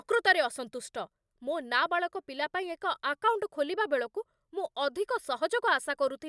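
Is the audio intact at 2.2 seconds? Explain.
Yes, the speech at 2.2 seconds is intact, with no dropout, click, distortion or other fault audible at that moment.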